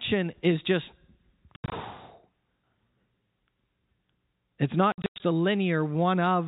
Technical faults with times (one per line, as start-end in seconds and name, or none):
1.56-1.72 packet loss filled with silence
4.92-5.20 packet loss filled with silence